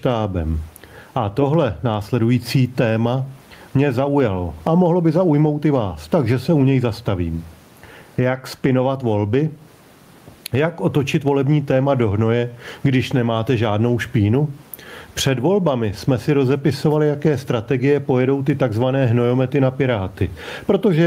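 Speech runs through the whole clip with gain pumping. The gain swings by around 15 dB. Likely cause: a fast limiter fighting excessive input gain. The room noise sits about 42 dB below the speech.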